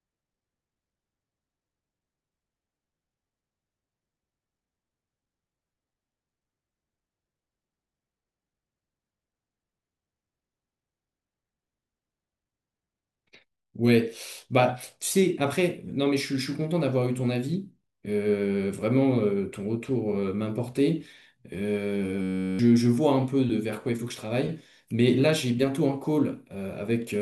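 At 22.22 s the speech freezes into a system hang loop lasting until 22.59 s. The driver or computer stalled while the sound hardware kept replaying one 10.67 ms slice of its ring buffer, which fits a 512-sample buffer, about 35 times over. Because the loop is so short, it comes out as a steady 93.8 Hz buzz rather than a stutter, and around 400 ms of speech is lost. Unlike a dropout or underrun, which leaves silence or irregular crackles, the exact repetition gives a stable pitched tone.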